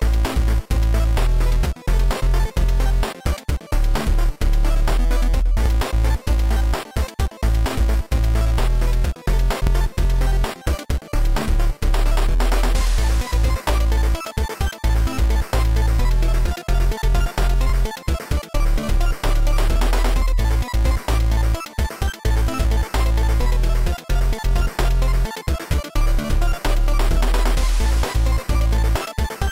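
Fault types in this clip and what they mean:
Overlapping chunks: The audio was processed in 4-second blocks, and each new block starts slightly before the previous one ends. At each join, 13 ms of sound plays twice. This is too short to hear as an echo. Instead, each join gives a brief click or tiny stutter. These fall at 1.64, 5.66, 9.67 and 17.70 s, all on the same 4-second grid.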